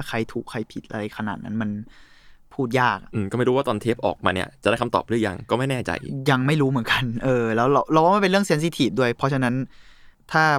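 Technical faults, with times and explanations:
Nothing stood out on listening to this speech recording.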